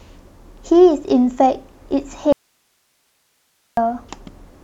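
Speech with an audio dropout to a faint residue from 2.33 s to 3.77 s: the signal cuts out abruptly for about 1.45 s, leaving only hiss roughly 50 dB below normal level, then returns mid-flow. The break most likely comes from a momentary signal loss upstream while the downstream path stayed live.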